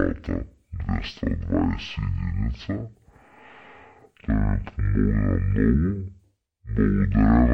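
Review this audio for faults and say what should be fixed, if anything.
Stereo read as mono runs throughout the speech: interleaved left and right samples are being consumed as one sequential channel, so every stereo frame becomes two mono samples. Playback runs at 0.5x speed and sits 12 semitones, a full octave, low. Fix by honouring the file's channel count at decode and downmixing explicitly.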